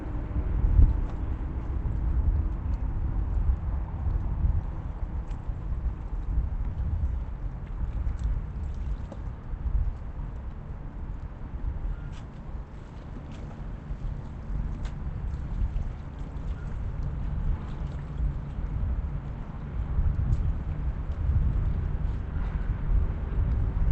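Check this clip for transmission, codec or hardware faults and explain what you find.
No faults found; the everyday sounds carry the expected signature of a call path, with content stopping at about 8 kHz, which fits Opus at around 40 kbps.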